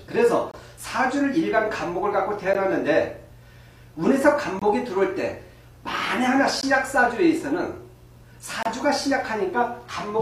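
Short holes of silence with hard edges cut into the sound at 0.51 to 0.54 s, 2.53 s, 4.59 to 4.62 s, 6.61 s and 8.63 to 8.66 s. Each lasts between about 15 and 28 ms and recurs roughly every 2 seconds. This is a gap between stream segments. The timestamps of consecutive 2-second segments leave a small space between them, and the player fills that space with silence. Nothing is lost from the audio. It is only pushed later.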